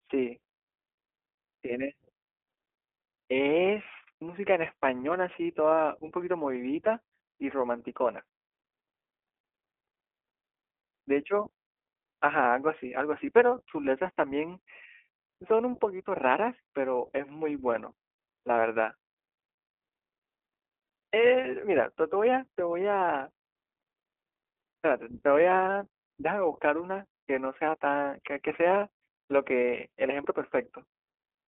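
Throughout, the iLBC codec makes the speech rough and slightly synthetic, with each 20 ms frame coded independently. A spectrogram shows nothing above 3.7 kHz.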